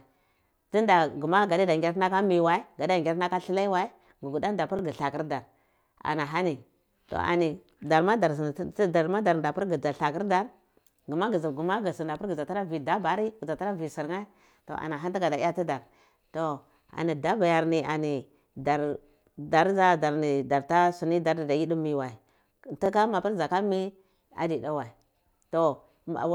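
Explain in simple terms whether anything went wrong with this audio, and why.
Something did go wrong: the speech has overlapping chunks. The audio was handled in 6-second pieces, and each piece starts about 23 milliseconds before the previous one ended, so that sliver plays twice. You hear a small stutter or tick at 4.79–4.81 s, 10.81–10.83 s, 16.83–16.86 s and 22.86–22.88 s, evenly spaced six seconds apart. That steady rhythm shows it's the chunk joins and not the recording itself.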